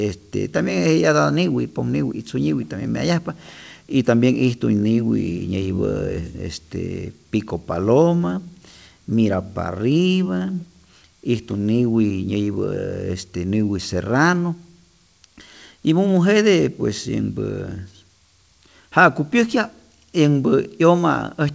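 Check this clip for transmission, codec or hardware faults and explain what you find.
Nothing's wrong here: the speech comes over the WebRTC call path as you'd expect, with nothing above 8 kHz, which fits a wideband codec like G.722.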